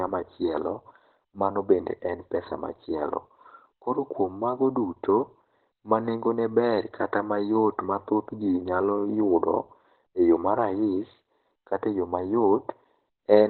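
From start to finish, the speech is band-limited and degraded. Nothing is heard above about 4.3 kHz. The top end is simply gone. Sibilants lose their edge, and the sound is muffled and hoarse. This is likely Opus compression in its speech mode, at a narrowband setting. The damage is heavy. It fits a bitrate around 12 kbps. At that rate the encoder keeps only a telephone-like band and models the speech within it coarsely.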